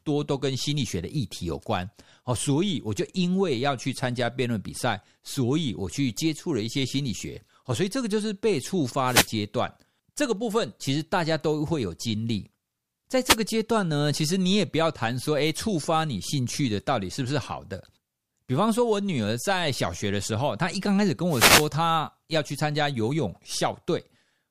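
Speech carrying three wireless microphone noise hits, at 9.05–9.29 s, 13.26–13.37 s and 21.28–21.69 s. Each is a brief swish of static as the analogue FM radio link fades: reflected signals cancel at the receiver and its noise floor jumps up. On a spectrogram each shows as a broadband vertical smear of hiss over the harmonics; the waveform shows a fuzzy noise band riding over the speech envelope.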